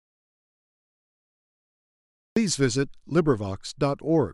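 From the start until 2.36 s the speech is an audio dropout to silence: silence with no room tone, likely a lost input, unlike a gate's gradual closing.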